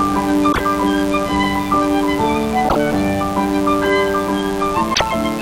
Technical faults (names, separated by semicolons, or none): mains buzz; damaged data in a compressed stream